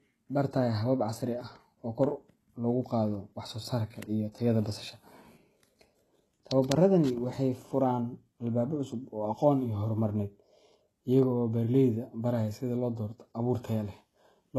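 Speech whose s sounds turn gritty and metallic throughout, with nothing above 12.3 kHz, likely from heavy HE-AAC compression, which fits a bitrate around 16 kbps.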